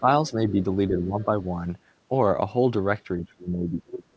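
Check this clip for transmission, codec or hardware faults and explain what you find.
One fault shows up, speech suppressed in double talk, in three stretches: 0.0 to 0.66 s, 0.88 to 1.32 s, and 3.17 s to the end. The echo canceller likely mistook overlapping far-end talk for its own echo and turned the talker down. The first two dips reach about 10 dB over roughly a third to under half a second. The last sinks about 30 dB, nearly cutting out. A waveform shows an abruptly shrunken envelope, and a spectrogram shows sudden fading across all bands. The call codec's cutoff at 8 kHz, which fits G.722, shows as an empty band above that line.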